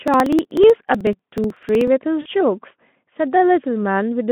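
From 0.08 to 1.88 s, the speech carries a steady train of small ticks, roughly thirty of them, one every 62 ms. At each tick, a couple of milliseconds of audio simply vanish. These are periodic USB or driver dropouts: something stalls the audio path on a fixed schedule, and the missing samples are skipped rather than filled.

From 2.21 to 2.27 s, the sound smears into a buzzy tone or coloured noise that fades, lasting about 40 ms. This is VoIP packet loss concealed by the speech codec, here the narrowband Speex coder. With what sounds like two 20 ms frames missing, the decoder extrapolates from its last pitch and filter while lowering the gain.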